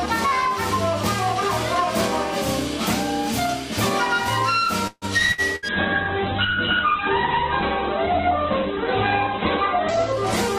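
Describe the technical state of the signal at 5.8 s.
At 5.8 s the sound has just turned muffled and rough, with a watery, smeared texture, and everything above 4 kHz is gone where the top previously reached 20 kHz. This is a call bitrate drop beginning at 5.69 s and lasting to the end at 10.59 s, bottoming out for about 4 s. The call's bandwidth estimate fell, so the encoder was given far fewer bits, consistent with a fall from roughly 96 kbps to about 8 kbps. It therefore coded more coarsely and narrowed the band.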